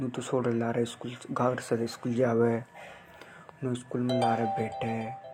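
Nothing stands out as a technical fault anywhere in this bit of speech, so there's really nothing here to flag.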